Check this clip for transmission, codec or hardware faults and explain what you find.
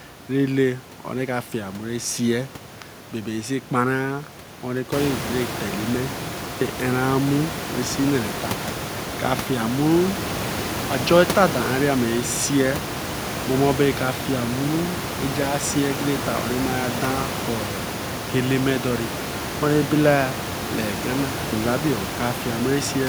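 No faults found.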